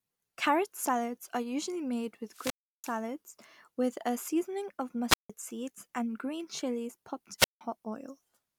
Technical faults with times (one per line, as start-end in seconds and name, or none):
2.27-3.02 wireless microphone squelch dropout
5.08-5.30 wireless microphone squelch dropout
7.38-7.61 wireless microphone squelch dropout